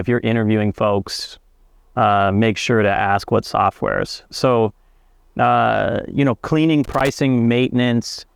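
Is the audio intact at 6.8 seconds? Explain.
No. Just after "uh you know cleaning", from 6.84 to 7.09 s, there is loose connector crackle: a worn or dirty contact rapidly making and breaking, chopping the signal. It sounds like a quarter-second irregular burst of crackly scratching.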